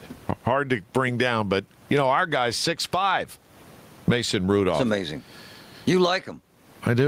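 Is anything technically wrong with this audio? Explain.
Yes. Gain pumping runs through the whole speech clip, with a level swing of around 20 dB. The room noise sits about 44 dB below the speech. Loud and quiet passages end up squashed close together. The likely cause is a microphone gain set far too high, with a fast limiter or compressor clamping it down on each loud sound.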